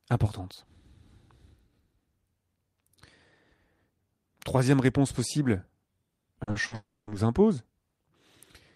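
Right around 6.43, 6.51 and 6.67 s there are three bits of short concealed packet loss. Each time about 40 ms of audio didn't arrive and the decoder bridged it by extending the sound it already had, so you get quick smears or little wobbles.

Then from 6.75 to 7.10 s comes what's likely a long network dropout. Roughly 320 ms is missing, so the concealment stretches the last sound into a fading buzz or hiss before about 200 ms of silence. The speech resumes at "nous impose" with that stretch simply gone.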